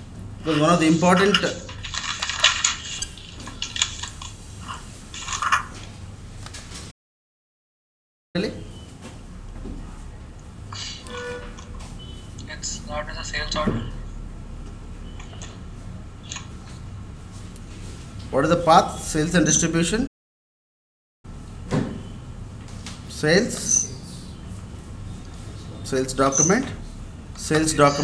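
At 6.91 s the sound cuts out for about 1.43 s, then returns at 8.36 s; a second playback stall runs from 20.06 s to 21.25 s, about 1.17 s. Each gap sounds like an abrupt dropout in mid-flow, likely because the player ran short of data or its thread was held up. A waveform shows a flat silent stretch, and a spectrogram shows a blank vertical band across all frequencies.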